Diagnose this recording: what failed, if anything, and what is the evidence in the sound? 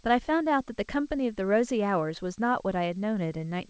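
Nothing failed: the speech came through a WebRTC call path, and the band stopping at 8 kHz fits G.722 at 64 kbps, with no stage from capture to playback showing a fault.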